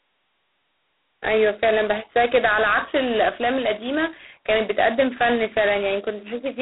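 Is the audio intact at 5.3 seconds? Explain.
No. At 5.3 s, as throughout, the speech carries heavy G.726 ADPCM damage: coding only coarse differences from a predicted sample leaves a harsh, rasping hiss, which fits the 16 kbit/s mode. Unlike steady line noise, it rises and falls with the speech. The band runs about 250 Hz to 3.5 kHz, with nothing above 3.9 kHz.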